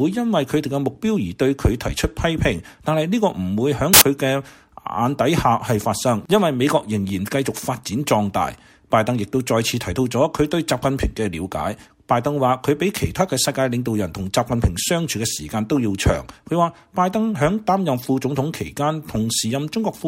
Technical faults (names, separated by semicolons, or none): samples built from the wrong bytes